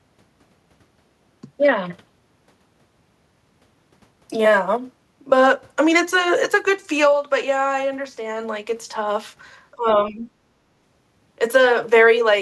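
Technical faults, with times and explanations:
9.75 to 9.87 s and 10.09 to 10.27 s, speech suppressed in double talk: the speech drops briefly, by about 20 dB and then about 15 dB, for roughly a tenth and a fifth of a second. It was likely an echo canceller that mistook overlapping talk for echo and turned everything down.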